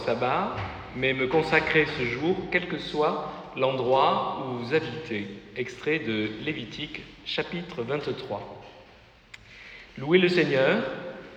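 From 1.73 to 2.89 s the sound turns dull, from channel delay (comb filtering): one channel lags by roughly two samples, cancelling highs from about 10 kHz.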